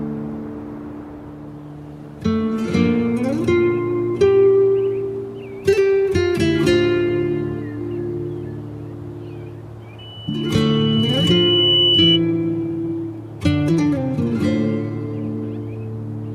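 A microphone picking up its own loudspeaker creates loudspeaker feedback squeal: from 9.98 to 12.20 s a 3 kHz tone swells over about two seconds until it rises just above the audio.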